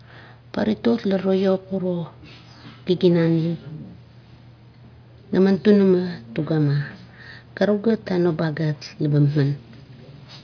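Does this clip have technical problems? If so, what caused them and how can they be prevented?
No, nothing stood out as a technical problem on listening to this speech clip, so there is nothing here that needs preventing.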